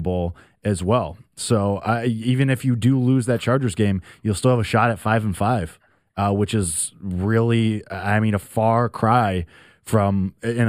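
Channel delay (comb filtering) runs through the whole speech clip: one channel arrives a tiny fraction of a millisecond behind the other, which fits an offset of only a few samples, and when the two are folded to mono the shared signal cancels at regularly spaced frequencies. With a gap that short, the first notch falls high, somewhere around 7 kHz, so the speech loses air and crispness and takes on a hollow, dulled top end.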